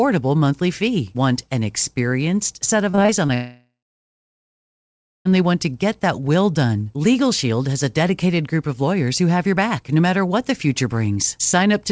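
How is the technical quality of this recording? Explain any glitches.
The recording has two clear network glitches close together, and the audio carries nothing above 8 kHz, which points to a wideband call codec such as G.722.

From 2.90 to 3.30 s, just after "an experienced set", repeated packet loss gives a choppy, robotic stretch. Five short gaps, none longer than 33 ms, are each patched by stretching the previous sound, so about a quarter of that span is filler. The sound keeps returning between holes, unlike a dropout.

From 3.34 to 5.27 s, just before "want to get that", the audio breaks off for almost 2 seconds. A brief fading buzz continues the last sound, then about 1.5 s of silence follows before the audio resumes with that part missing. One long hole rather than many short ones points to a likely long network dropout.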